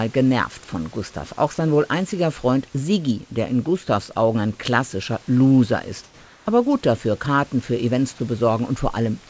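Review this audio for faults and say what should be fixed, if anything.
From 6.04 to 6.46 s, just before "aber gut dafür", the room background turns into a steady, featureless hiss, about 2 dB quieter. This is comfort noise in place of the background, likely from discontinuous transmission filling a detected pause with synthetic noise. Turn off discontinuous transmission on this call path.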